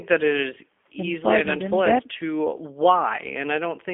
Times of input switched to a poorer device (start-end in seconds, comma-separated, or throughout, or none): none